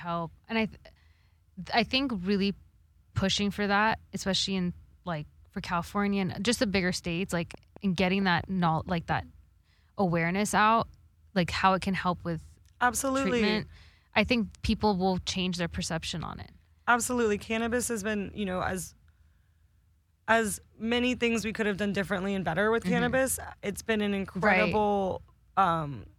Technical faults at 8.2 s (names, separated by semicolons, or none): train of clicks